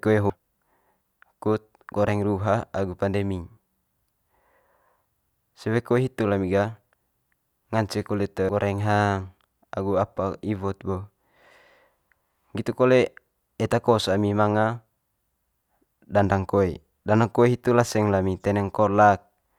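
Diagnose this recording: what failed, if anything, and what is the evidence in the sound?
The failure is in the codec stage: damaged data in a compressed stream. Brief glitches at 0.30 s and 8.49 s interrupt the speech where the decoder misread corrupt frames and resynced on the next header. A spectrogram shows thin vertical smears of garbled energy, and the waveform shows abrupt discontinuities.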